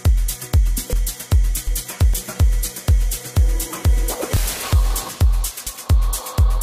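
At 0.93, 1.67, 2.14, 4.37 and 5.67 s the sound jumps abruptly, skipping roughly a tenth to a third of a second each time with no gap. That's likely a dropped buffer (overrun), where the hardware overwrote samples before they were read.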